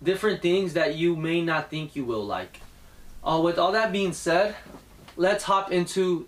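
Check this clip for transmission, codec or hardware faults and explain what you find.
One hardware fault is present: video or display buzz from 2.06 s to 5.33 s. A screen or video cable is coupling into the audio path, imposing a 50 Hz field-rate buzz with hash above it and a high tone at 15.6 kHz, the line rate, roughly 30 dB below the main sound.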